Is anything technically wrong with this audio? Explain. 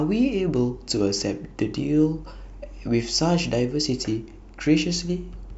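No, nothing technically wrong turns up anywhere in this speech recording.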